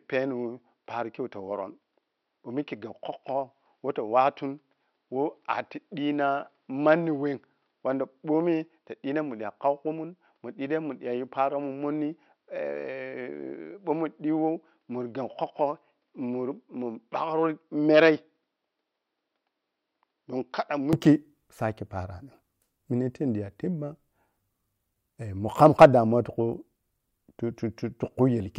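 Speech recording where the first 20.9 seconds sound dull and boxy, with nothing above about 5.8 kHz, roughly 5 dB quieter, and a faint noise floor well below the voice. At 20.93 s it opens up with no gap. That's likely an input switched to a poorer device.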